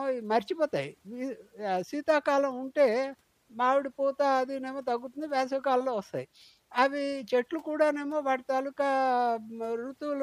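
No technical faults can be heard at any point in the recording.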